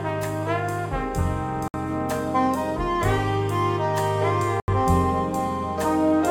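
A block of digital silence opens at 1.68 s and lasts 60 ms, ending at 1.74 s; a second one runs from 4.6 to 4.68 s, 80 ms long. In each, the music is replaced by silence, likely the sign of an output buffer that went unfilled in time. The drop into silence and the return both happen with no fade, and at these lengths each gap registers as a brief hole rather than a single tick.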